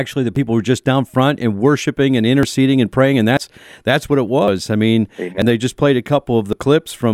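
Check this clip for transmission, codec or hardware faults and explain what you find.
The speech has six small skips at 0.36, 2.43, 3.37, 4.48, 5.42 and 6.53 s. Each jumps ahead, losing a few hundredths of a second, most at 4.48 s. These are likely dropped buffers (overrun), where unread audio is overwritten and the edges are spliced together.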